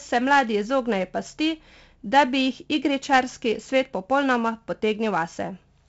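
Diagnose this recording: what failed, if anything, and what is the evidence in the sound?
4-bit ADPCM compression runs through the whole clip, a codec-stage fault. The speech carries a gritty hiss that rises and falls with its level, loudest on the strongest syllables, and sharp onsets sound roughened where the adaptive step size lags behind the attack. Each sample is coded as a coarse 4-bit step from a prediction, so the error is heavy. Nothing survives above 7.7 kHz, which points to a 16 kHz sample rate and fits 64 kbps.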